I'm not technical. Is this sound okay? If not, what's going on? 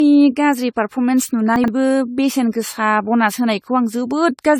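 No. Throughout, the speech sounds swirly, smeared and hollow, with blurred starts to sounds. That is likely generation loss: it was saved in a lossy format about seven times, each pass adding damage.

From 1.56 to 1.68 s there is a brief jumbled moment. That is chunks out of order: a 40 ms piece played two pieces too late.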